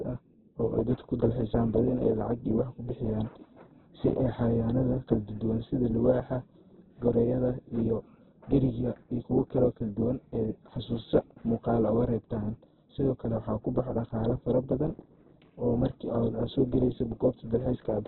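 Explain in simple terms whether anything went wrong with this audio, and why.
Heavy Opus compression, likely, runs through the whole recording: the speech sounds muffled, with nothing above about 4.1 kHz, and rough and grainy rather than swirling like MP3.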